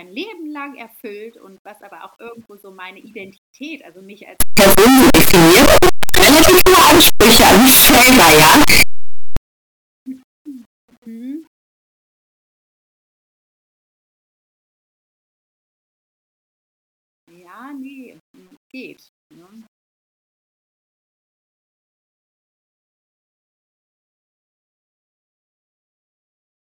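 Between 4.40 and 9.37 s this speech clip bursts into very loud, harsh distortion, with quiet stretches as loud as the rest. The likely cause is signed and unsigned mixed up in its 8-bit samples, so every zero crossing lurches across the full range.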